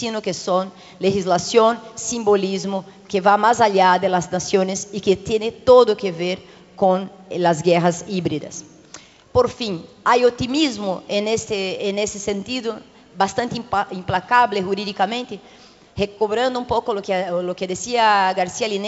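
No technical faults are present in the signal, which carries nothing above 8 kHz, a band limit that points to a wideband call codec such as G.722 at 64 kbps.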